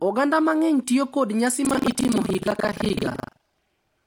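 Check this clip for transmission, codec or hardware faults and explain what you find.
There is one fault: buffer tearing from 1.62 s to the end. A steady 23.4 Hz robotic buzz rides the speech, consistent with a 2048-sample buffer. About a third of each period replays audio roughly 150 ms old, hard-joined both sides. Unlike underrun dropouts, there are no silent gaps.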